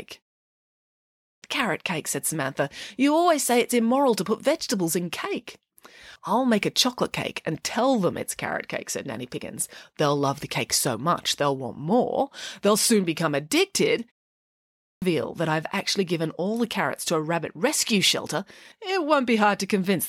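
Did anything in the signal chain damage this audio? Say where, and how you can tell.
Yes. Clipped start after a pause at 0.85–1.42 s and 14.37–15.02 s: the playback device sleeps through silence, so speech resumes abruptly, missing its first 0.57–0.65 s.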